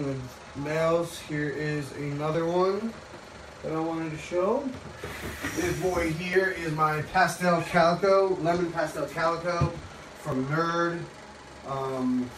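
At 2.35, 6.33 and 10.32 s the sound skips about 10 ms and resumes with no gap. The regular 4 s spacing likely points to audio missing between chunks. Waveform and spectrogram show a seamless splice with a discontinuity.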